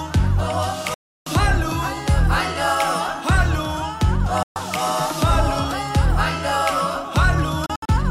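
The audio drops out three times, a classic digital broadcast dropout where the receiver stops getting clean frames and mutes until good ones arrive. There's a silence from 0.94 to 1.27 s (about 320 ms), a shorter one from 4.43 to 4.56 s, and a cluster of short holes between 7.66 and 7.89 s, the longest about 64 ms. Each cut fades out in roughly 3 ms rather than clicking, and whatever was broadcast during the gaps is simply gone.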